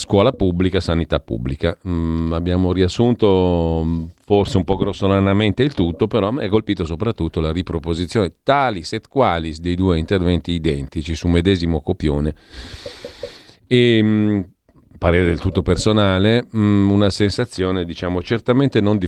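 No technical faults are audible.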